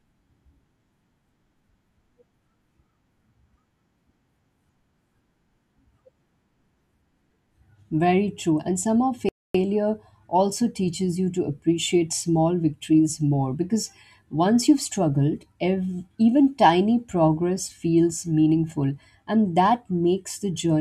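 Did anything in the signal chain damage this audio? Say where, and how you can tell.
Yes, at playback: the speech drops to silence from 9.29 to 9.55 s, 257 ms, then resumes. This playback stall was likely caused by data starvation.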